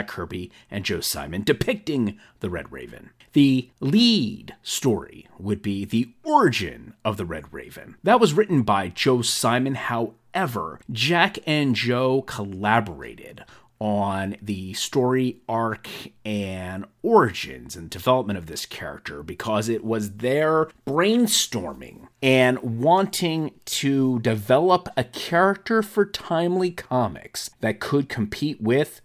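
A speech recording with nothing technically wrong to report.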